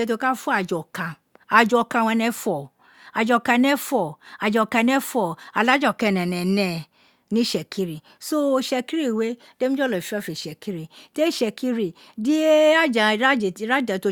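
No technical faults can be heard anywhere in the recording.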